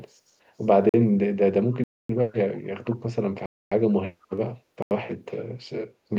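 At 0.89 s the speech drops out for about 45 ms into a block of digital silence, and the same fault returns for 256 ms from 1.84 to 2.09 s and again from 3.46 to 3.72 s. The program most likely failed to deliver samples in time, so zeros were played. Each cut starts and ends abruptly. On a waveform these are dead-flat lines with vertical edges. A spectrogram shows blank columns bordered by thin broadband streaks.

From 4.22 to 4.27 s a brief echo leak appears: a very faint copy of earlier speech, delayed by 454 ms and roughly 40 dB down, likely left over by an echo canceller on a loudspeaker end that missed part of its microphone pickup. It registers as a barely visible ghost of the earlier pattern, shifted almost half a second later.

A final block of digital silence cuts 85 ms from 4.82 to 4.91 s, a length that fits a 4096-sample buffer at 48 kHz. It has the same hard edges and flat gap.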